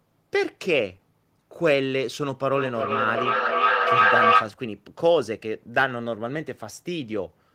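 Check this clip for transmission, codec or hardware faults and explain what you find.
There's one fault here: feedback echo between two devices, from 2.55 to 4.57 s. A second device in the room is playing the call back into a nearby microphone, and neither echo canceller removes the other's output. The speech returns roughly every third of a second, thinner and ringier each pass, building up to about 6 dB above the speech instead of fading.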